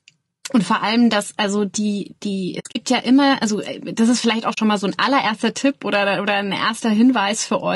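Low-delay AAC compression runs through the whole speech clip and is plainly audible: the voice sounds rough and grainy, with a noisy fill between the pitch harmonics and a top band that sounds thin and somewhat synthetic. The likely cause is AAC-ELD coding at 32 kbps. Its very short frames keep the delay low for calls, but they separate harmonics poorly and use bits inefficiently, so at this rate detail between and above the harmonics breaks down.

AAC frame loss with muting occurs from 2.59 to 2.76 s and again from 4.53 to 4.58 s. Coded frames went missing, and the decoder replaced their spectrum with silence. The overlapping windows fade the sound down and back up, so each gap has soft edges. The first stretch holds about 120 ms of missing audio scattered over 160 ms, with the longest hole roughly 70 ms. The second holds 40 ms of missing audio.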